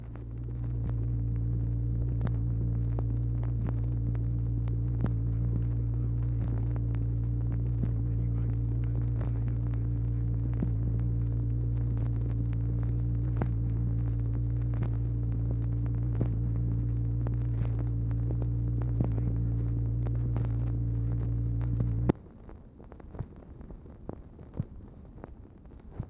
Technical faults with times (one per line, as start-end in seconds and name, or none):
none